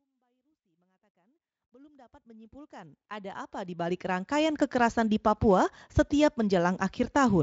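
No technical faults are audible.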